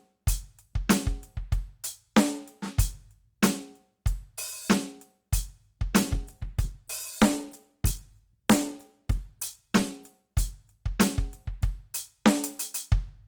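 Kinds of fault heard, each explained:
Call bitrate drop: from 5.98 s to 11.43 s the music turns coarse and muffled as the call's encoder is told to spend far fewer bits, which fits a fall from 64 to 15 kbps, bottoming out for 3.6 s before recovering.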